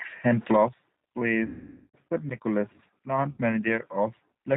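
Throughout, the speech sounds slightly rough and synthetic, thin, with nothing above 4 kHz. This is plainly audible G.729 codec damage, consistent with an 8 kbit/s stream rebuilding each 10 ms frame from a vocal tract filter, pitch predictor and a few pulses.

From 1.46 to 1.97 s, and again from 3.32 to 3.40 s, the sound smears into a buzzy tone or coloured noise that fades. This is VoIP packet loss concealed by the speech codec: about 480 ms and then 60 ms of audio went missing, and the decoder extended its last pitch and filter at falling gain.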